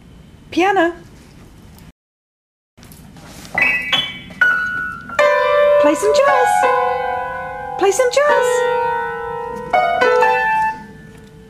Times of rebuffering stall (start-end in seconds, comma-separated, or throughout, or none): 1.91-2.78